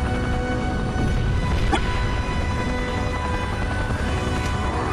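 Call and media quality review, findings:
Brief glitch, 1.69 to 1.78 s, about 0.1 s. Damaged data in a compressed stream: corrupted bytes garble frames, and the decoder loses sync until it finds the next frame header.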